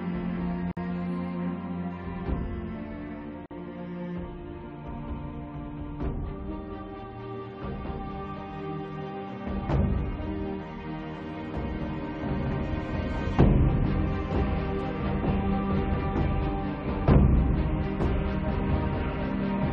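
At 0.71 s the sound drops out for about 54 ms, then resumes exactly where it left off; at 3.46 s the same happens for about 48 ms. Both holes have smeared edges. Each is a gap at a join of encoded pieces: separately encoded segments were spliced without trimming, so one encoder's end padding and the next one's start-up delay both remain as silence.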